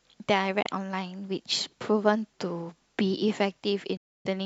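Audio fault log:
0.62–0.67 s and 3.97–4.26 s, Bluetooth dropout: audio packets likely failed to reach the headphones in time and were discarded, so the speech cuts to silence for about 23 ms (consistent with one lost frame) and then 279 ms (consistent with roughly a dozen). Each time it resumes further along, as though it had kept playing.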